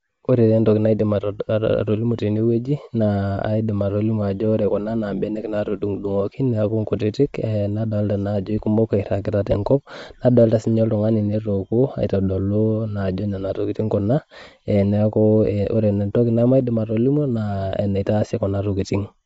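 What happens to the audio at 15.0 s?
At 15.0 s, as everywhere in the clip, the speech stops dead at 7.7 kHz and sounds grainy and breathy. That's likely Bluetooth LC3 compression, starved of bits (around 32 kbps), dropping upper spectrum and filling it with noise.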